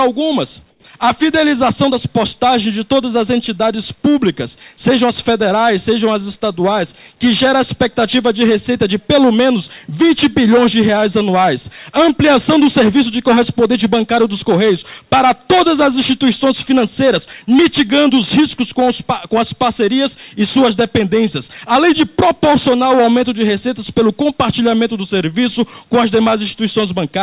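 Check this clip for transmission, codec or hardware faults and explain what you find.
One fault stands out, near the start. From 0.70 to 0.84 s there is comfort noise in place of the background. The sender likely stopped transmitting during a quiet pause. The receiver then filled that 140 ms gap with synthetic noise shaped roughly like the background. What you hear is a smoother hiss, about 12 dB quieter than the real background around it. Throughout the clip nothing reaches above 4 kHz, which fits a narrowband call codec such as G.711 A-law.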